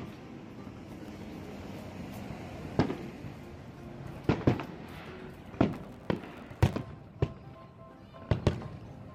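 Processor overload crackle appears from 0.97 to 1.25 s and more heavily from 5.73 to 7.01 s. Buffers lasting under a millisecond go silent, a handful and then dozens, giving gritty bursts rather than one clean dropout or level-dependent clipping distortion.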